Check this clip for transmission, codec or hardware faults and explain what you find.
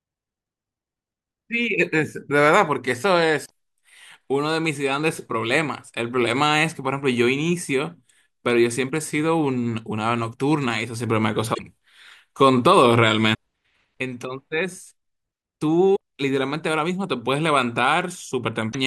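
There's damaged data in a compressed stream, five spots: 3.42–3.51 s, 11.51–11.60 s, 13.33 s, 15.93–15.97 s and 18.69–18.75 s. Bad bytes throw the decoder off its frames while it hunts for the next header, so the speech breaks into short chirps, squawks, clicks or brief holes.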